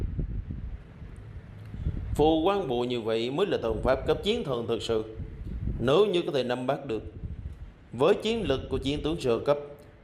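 No technical faults can be heard anywhere in the audio; the signal stays steady and intact throughout.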